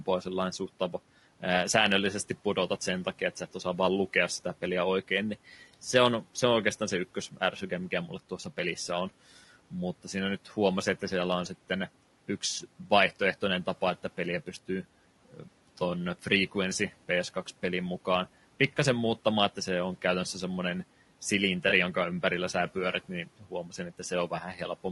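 All the way through, the speech has a rough, grainy edge, with noise filling the gaps between the harmonics and a top end that sounds thin and a bit synthetic. That's likely low-delay AAC compression, the AAC-ELD kind used on video calls, where the short frames can't pin down the pitch harmonics well and bits run out fast. The damage is plainly audible, which fits a bitrate somewhere around 32 kbps.

From 15.32 to 15.48 s there's speech cut by the noise suppressor. It mistook part of the speech for background and pulled it down by about 10 dB at the deepest point, so for around a tenth of a second the sound goes faint and swallowed. The room noise sits about 25 dB under the speech, which is exactly the low-level stuff the suppressor was trying to remove.

Between 21.69 and 21.73 s, just before "jonka ympärillä sä pyörit", comes AAC frame loss with concealment. About 20 ms of audio went missing, which fits a single lost frame. 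The decoder patched the gap from the last good spectrum, so you hear a short smeared, noisy blip.

Right after "ympärillä sä pyörit niin", from 23.4 to 24.11 s, the noise suppressor cuts the speech again, by about 11 dB at worst. Around a fifth of a second within that stretch ends up sounding faint and swallowed.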